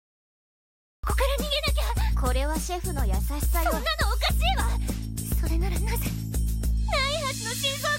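The first 1.04 seconds are pure digital silence, and then sound bursts in abruptly mid-way through, with no attack or fade-in. This is a cut-off start: capture began late, so whatever preceded 1.04 s was never recorded and the opening is truncated.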